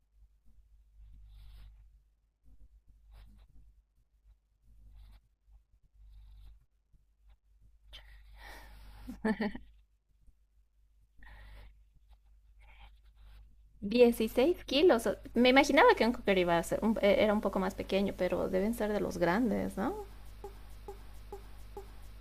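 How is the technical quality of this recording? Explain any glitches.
The recording has one clear glitch at the end. From 20.44 s to the end, a broken-record loop repeats a 0.44 s fragment four times back to back. This is likely a stalled player or stream resending its last buffer, so the speech that should follow is lost.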